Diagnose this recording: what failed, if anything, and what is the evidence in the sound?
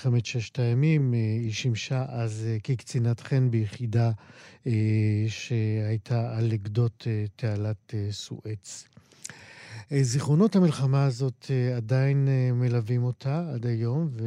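Nothing in the chain has failed: the speech arrives intact at every stage, with no audible evidence of any defect from wiring through playback.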